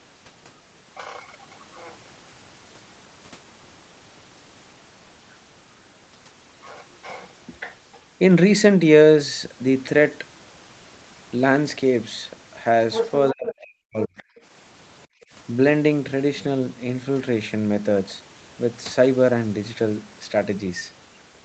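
At 12.92 s, for about 0.2 s, a second voice slips in underneath the talker, only a few dB below them. That's the other side's voice leaking through, most likely because the far end was playing from a loudspeaker and the echo canceller didn't scrub all of it out of the mic. It's a short, fairly loud scrap, close enough in level that you notice it as a separate voice.

From 13.32 to 14.23 s the talker's own speech gets pushed down hard, by something like 40 dB at the deepest point, with the suppression covering roughly 0.7 s of that stretch. This is speech suppressed in double talk. Both sides were probably talking at once and the canceller, unable to tell its own talker from the echo, ducked everything. In the middle of it, at 13.46 s, another brief fragment of the other side's voice leaking through pops up, about 10 dB under the speech, which fits that same overlap.

At 15.07 s, for about a fifth of a second, the room sound behind the talker drops out, by about 29 dB at its deepest, then comes back. 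That's background gated by the echo canceller: with the loudspeaker active it clamped the mic right down, and the ambience disappeared until it let go. Throughout, nothing comes through above 8 kHz, which points to an Opus call path at a modest bitrate in the region of 32 kbps.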